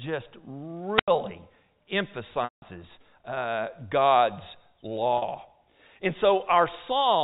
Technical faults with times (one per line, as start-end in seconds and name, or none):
0.95-1.08 wireless microphone squelch dropout
2.44-2.62 packet loss with pitch repetition
5.18-5.22 packet loss with pitch repetition